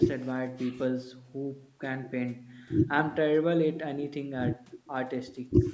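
Nothing stood out on listening to this speech, which has passed through call microphone processing that trims the lowest bass and carries nothing above 8 kHz, as is normal for that path.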